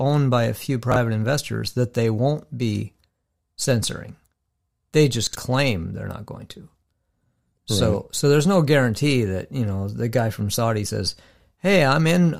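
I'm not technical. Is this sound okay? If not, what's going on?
No. Short slices of the recording, each about 21 ms, arrived late and played after the slices meant to follow them. That is called chunks out of order, and it sounds like brief jumbled moments at about 0.92 s (between "by a few" and "investors that they won't"), 5.27 s (just before "claim they're not going") and 6.83 s.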